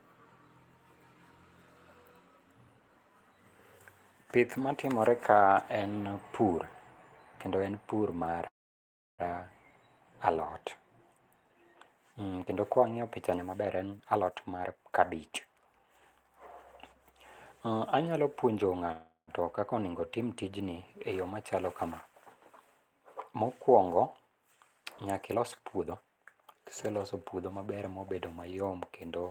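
At 8.47 s the audio stalls for about 0.74 s in a call audio freeze, likely because packets were held up and the receiver's jitter buffer ran dry. The last sound is stretched into a brief fading buzz, then about 680 ms of silence before the speech resumes where it left off, with nothing lost but a gap inserted. A spectrogram shows smeared horizontal bands decaying into an empty stripe, and the waveform flattens to near zero. A shorter freeze at 18.92 s lasts about 0.39 s and is almost all the decaying buzz, with only about 80 ms of true silence.

Right after "kendo kwa wang'iyo pichani", from 13.52 s to 16.25 s, a jitter buffer speed-up plays the speech at 126% speed with unchanged pitch, cutting about 0.7 s of backlog. It sounds rushed. The waveform shows syllables packed tightly, and the spectrogram's harmonic spacing stays the same while events crowd together in time. A milder speed-up runs from 25.31 s to 27.74 s at 114%, removing about 0.4 s.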